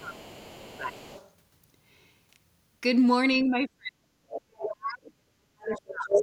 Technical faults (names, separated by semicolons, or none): speech suppressed in double talk; other side's voice leaking through